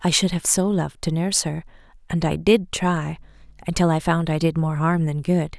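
At about 3.12 s a mains hum comes in under the speech and sits there until roughly 5.28 s. It's a steady low drone right at 50 Hz, with a few low harmonics stacked on top, running around 30 dB below the speech, so it's quiet. That's the power line leaking into the signal path, most plausibly through a ground loop or a transformer sitting close to the cabling.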